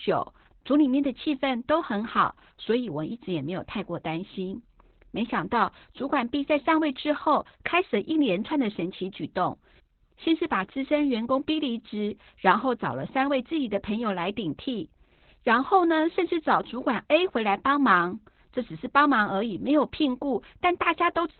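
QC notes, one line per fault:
Throughout: Opus voice compression, heavy. Nothing is heard above about 4.3 kHz, so the speech sounds muffled and boxed in. The coarse SILK coding makes it hoarse and slightly robotic. This fits narrowband voice coding at a very low bitrate, around 8 kbps.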